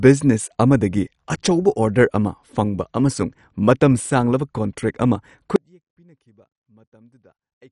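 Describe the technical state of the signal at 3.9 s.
At 3.9 s the speech carries MP2 compression throughout: dull, gurgling granular distortion with nothing above 11.3 kHz, likely from starved sub-bands, which fits a low bitrate near 48 kbps.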